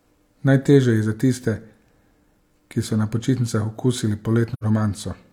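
From 4.53 to 4.64 s, AAC frame loss with muting silences 85 ms, which fits two lost frames. The overlapping windows fade the edges, so the hole is soft-edged rather than hard-cut.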